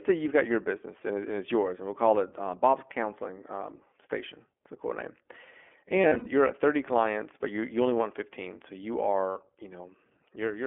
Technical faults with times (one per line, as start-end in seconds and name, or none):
0.00-10.67 iLBC codec
6.02-6.28 lost iLBC frames
9.30-9.38 lost iLBC frames